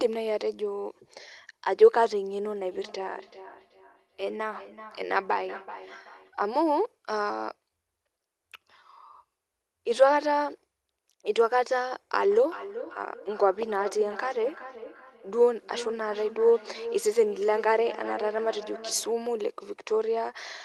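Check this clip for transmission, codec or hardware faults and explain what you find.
Feedback echo between two devices occurs from 2.57 to 6.37 s and again from 12.31 to 19.27 s. A second device in the room replays this call and its microphone returns it. The local canceller ignores that device's output, so the speech comes back at a fixed interval of roughly 0.4 s, reaching about 20 dB and then about 13 dB below the speech. Unlike room reverberation, it is a distinct, evenly spaced repeat rather than a smooth decay.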